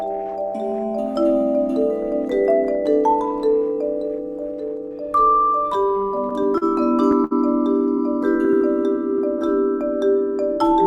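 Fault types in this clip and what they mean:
Repeated stalls (stutter): Packets arrived late again and again, so the playback buffer kept running dry and the receiver had to hold on to the last bit of sound until more came. Between 5.73 and 6.63 s there are seven such holds, about 100 ms in all. The longest is 38 ms, and together they cover roughly a tenth of that stretch. Nothing is dropped. Unlike a single stall, the sound drags and judders in a cluster rather than catching once.
Short stall from a late packet: Here a single packet came in late, at 7.24 s. The receiver stretched the sound it already had for about 64 ms, then carried on from exactly where it left off, so nothing is lost. The playback delay grows by that same 64 ms. What sets it apart from the stutter just before is that it is one isolated hold with a faint buzz or dip, not a run of repeated catches.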